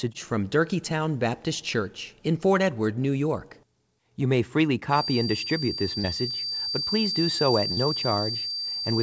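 Feedback whistle, from 4.87 s to the end of the clip: a thin, steady tone at 4.7 kHz sits behind the speech, only a little quieter than the talker and swelling and fading slowly in level. The likely cause is a loudspeaker-to-microphone loop held right at the edge of feedback, so one frequency keeps ringing without building into a howl. It falls within the call's band, which stops at 8 kHz, so nothing removes it.

Short concealed packet loss, at 6.00 to 6.07 s: about 40 ms of audio never arrived in time, and the receiver covered the gap with 38 ms of synthesised continuation before blending back into real speech. The gap sounds like a brief smear or wobble in the speech, with a small part of the speech glossed over rather than cleanly heard.

Burst of packet loss, at 7.72 to 7.80 s: a run of audio was lost, and the receiver stretched the last sound over 48 ms, fading it as the gap went on. 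That continuation is heard as a held, dwindling buzz or hiss in place of real speech. When the audio resumes, about 40 ms has gone missing, so the speech jumps slightly forward instead of picking up where it left off.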